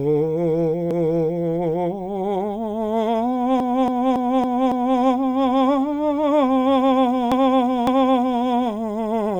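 A stutter jumps the music back three times: at 0.91 to 1.47 s a 0.56 s block plays once more, at 3.60 to 4.99 s a 0.28 s block repeats five extra times, and at 7.32 to 8.43 s a 0.56 s block returns twice. These are repeated frames, compressed frames sent again so the decoder replays them, which stretches the audio.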